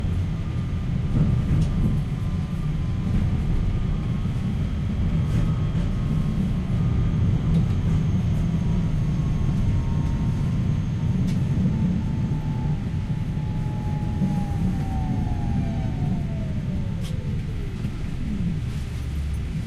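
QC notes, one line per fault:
No faults heard anywhere in this sound recording.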